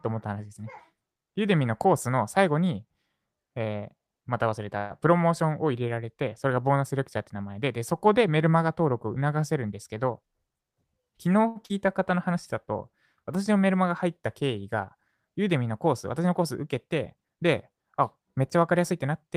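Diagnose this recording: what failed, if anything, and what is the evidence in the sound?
A call audio freeze occurs at the network and jitter buffer stage, from 4.77 to 4.92 s. The last sound is carried on as a fading buzz or hiss for about 128 ms. Then the speech resumes where it stopped. The likely cause is held-up packets draining the buffer. Nothing is lost, but the delay grows by 128 ms.

Jitter buffer speed-up occurs at the buffer stage. From 10.12 to 11.09 s the speech runs at 112% speed and sounds hurried, with about 150 ms trimmed out. From 18.92 s to the end it runs at 109%, losing about 50 ms. Pitch stays unchanged because whole pitch periods are cut.

A short stall from a late packet occurs at 11.48 to 11.58 s. It comes from the network and buffer. One packet arrived late. The receiver stretched the current sound for 79 ms, so it is held audibly too long with a slight buzz or dip. 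Playback then continued from the same point, with nothing missing.

A short concealed packet loss follows at 11.66 to 11.71 s, also a network fault. About 40 ms of audio never arrived in time. The decoder filled 39 ms by extending the preceding sound, then blended back. The result is a brief smear or wobble where that stretch of speech should be.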